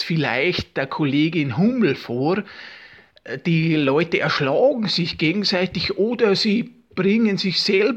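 No technical faults can be heard in this audio. There is nothing here that calls for a time or a cause.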